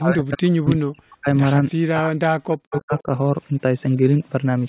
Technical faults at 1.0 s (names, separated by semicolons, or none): speech suppressed in double talk